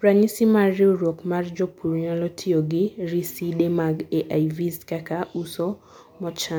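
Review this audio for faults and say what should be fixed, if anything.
No faults; nothing needs fixing.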